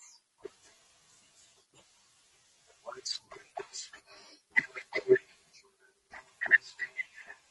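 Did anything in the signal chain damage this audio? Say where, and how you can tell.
Yes. Throughout the speech the voice sounds rough and grainy, with noise between the harmonics. This is the codec stage, likely low-delay AAC compression such as AAC-ELD: its short frames resolve pitch harmonics poorly, and the damage fits a bitrate near 32 kbps.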